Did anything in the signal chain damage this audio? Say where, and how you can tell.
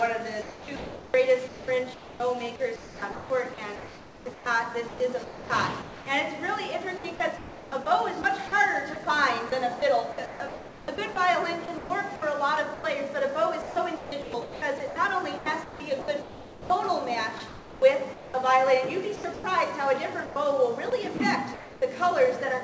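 Yes, and it's at the call-processing stage, almost certainly the sender's voice detector. The first fault is sound chopped by the voice detector, across six stretches: 0.42–6.06 s, 6.98–12.22 s, 13.62–16.70 s, 17.38–18.34 s, 19.16–19.44 s and 20.90–21.82 s. Within each one, pieces of the sound drop out and are replaced by comfort noise. About 2.9 s goes missing in the first stretch, around 1.4–1.5 s in the next two, and less later on. The likely cause is the detector toggling transmission on and off, with the receiver filling the gaps with comfort noise.

The second fault is sound dropped by the voice detector, twice, at 12.74–12.84 s and 20.26–20.36 s. Each time the sound gives way to comfort noise for 100 ms and then returns, with no repeated on-off flicker around it. The likely cause is the detector briefly mistaking quieter material for background and pausing transmission, with comfort noise played in its place. 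All of this rides on a G.722 path at 64 kbps, which is why nothing comes through above 8 kHz.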